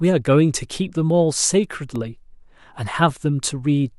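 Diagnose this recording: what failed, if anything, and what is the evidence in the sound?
A block of digital silence at 1.96 s in this speech. Driver or buffer stage. A 0.67 ms dropout, likely a 32-sample block left unfilled, gives one tick.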